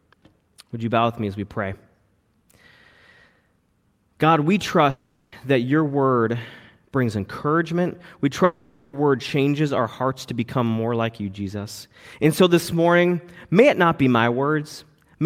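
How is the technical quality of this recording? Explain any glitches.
The speech is interrupted twice by what is likely a long network dropout. At 4.90 to 5.33 s the last sound is stretched into a fading buzz for about 0.42 s and then ends in a short silence. At 8.44 to 8.94 s a similar fade fills roughly half a second with no silence. Each time the speech resumes further on with a section missing. The drawn-out fade and the skipped audio set this apart from a brief packet-loss click.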